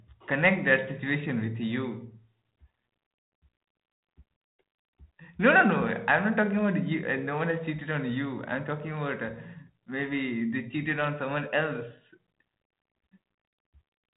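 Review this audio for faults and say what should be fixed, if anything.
Nothing needs fixing: the speech runs over a 32 kbit/s G.726 path that is working as intended, with nothing above 3.9 kHz as that telephone band allows.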